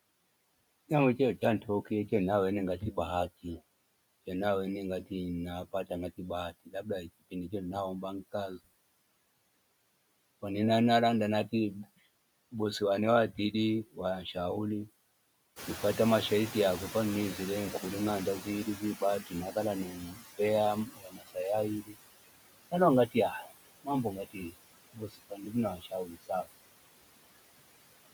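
Throughout, you can hear noise suppressor artifacts. The suppressor pulls the steady background down by about 20 dB, so the noise dips between phrases and swells back under the speech.

The speech cut by the noise suppressor shows up first from 0.89 to 2.1 s, just before "naweni ngati". Bits of the speech get mistaken for noise and turned down by up to about 9 dB, only a tenth of a second or so in total, so a few soft sounds go faint. It happens harder from 5.72 to 7.53 s, with drops of about 21 dB over roughly 0.2 s.

Around 15.5 s the room noise jumps by about 13 dB, and the noise suppressor is catching up from 15.56 to 20.12 s. Its noise estimate lags, so the louder noise comes through with less reduction at first. Over about 4.6 s it adapts and settles to roughly 13 dB of reduction.

The speech cuts get longer after that. From 18.42 to 21.97 s, about a second of speech is swallowed, with drops near 20 dB. 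From 22.71 to 26.47 s, around 1.5 s is pulled down by as much as about 21 dB, and those parts sound swallowed.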